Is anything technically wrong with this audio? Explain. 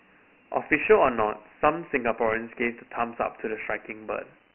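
Yes. Throughout the speech there is a gritty, grainy hiss that rides on the voice and rises and falls with it, and the sound is dull, with nothing above about 2.9 kHz and little below 200 Hz. This is Dialogic VOX ADPCM damage. The codec stores each sample as a coarse 4-bit step from a running prediction, so the error tracks the signal. The narrow band fits a 6,000-samples-a-second stream at 24 kbps.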